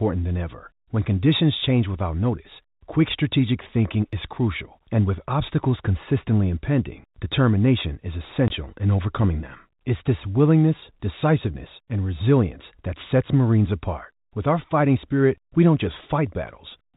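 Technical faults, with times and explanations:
8.48 s, packet loss filled with silence: right after "consistently impending determination is" and before "in overcoming them", the speech drops out for 20 ms, a gap that fits a single lost packet of that length. With nothing arriving for that slot, the receiver played silence instead, so the sound stops abruptly and resumes just as abruptly. The narrow G.711 A-law telephone band carrying the speech continues on either side of the hole.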